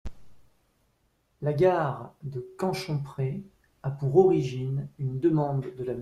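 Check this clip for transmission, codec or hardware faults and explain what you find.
Nothing stood out on listening to this speech; no faults were heard.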